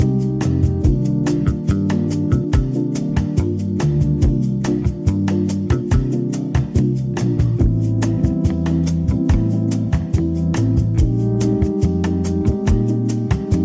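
No technical faults are audible.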